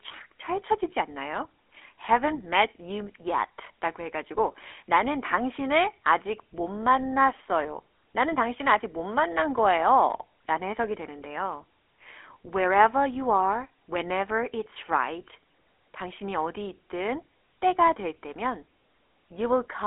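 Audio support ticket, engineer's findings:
GSM full-rate codec, whole clip. Speech band-limited, nothing above about 3.8 kHz, consistent with a 300 Hz to 3.4 kHz phone line. Plainly audible buzzy, gravelly roughness: vocal-tract model driven by regular pulses, excitation decimated to every third sample. Sound fits a 13 kbps GSM full-rate path.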